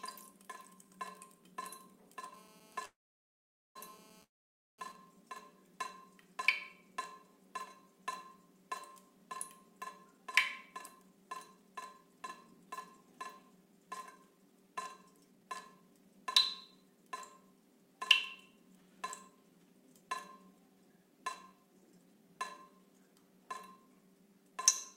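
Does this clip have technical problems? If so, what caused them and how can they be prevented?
Yes. From 2.34 to 4.92 s there is GSM phone buzz: a hard, raspy 217 Hz buzz sitting about 20 dB below the sound. A 2G phone in an active call was transmitting bursts 217 times a second, and the audio circuitry rectified those radio pulses into audible energy. On a spectrogram this shows as a steady horizontal line at 217 Hz with a ladder of evenly spaced harmonics above it, all unrelated to the sound itself. Keeping phones well away from microphones, cables and interfaces, or switching them to flight mode, prevents it.

Two call audio freezes interrupt the sound, from 2.85 to 3.77 s (0.9 s) and from 4.23 to 4.80 s (0.55 s). The likely cause is packets held up in transit so that the jitter buffer ran empty. In each freeze the last sound is stretched into a fading buzz or hiss, then silence for about 0.81 s and 0.51 s respectively. 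Playback then resumes where it stopped, so nothing is lost, but the delay grows by the length of each gap. A waveform shows a decaying tail followed by a flat line. A more stable network path, or a deeper jitter buffer, prevents it.

GSM signalling bursts follow from 4.95 to 6.04 s, around 30 dB below the sound. A phone in a call but with its user silent was sending only short groups of bursts, which were rectified into even ticks with a longer 217 Hz buzz twice a second. A spectrogram shows short vertical clusters, each carrying the 217 Hz harmonic ladder. The same separation from phones prevents it.

Jitter buffer speed-up runs from 10.68 to 17.94 s at 109 % speed, from 18.50 to 18.90 s at 110 %, and from 19.30 to 24.52 s at 110 %. Roughly 0.7 s, 50 ms and half a second of audio are trimmed away. The receiver was holding more audio than it aims for, so it repeatedly cut out short pitch-period-sized pieces to reduce the delay. 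The result sounds hurried at unchanged pitch. A spectrogram keeps the same frequencies while every event is compressed in time. A steadier network that avoids the delay build-up prevents it.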